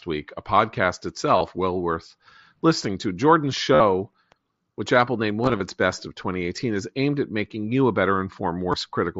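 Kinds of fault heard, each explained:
Concealed Bluetooth headset packet loss: missing headset packets were filled by repeating the best-matching recent waveform. Instead of the silent gaps of a plain dropout, brief buzzy tones hold at full level, each about 53 ms or shorter, at 1.38, 3.75, 5.43–5.60 and 8.72 s.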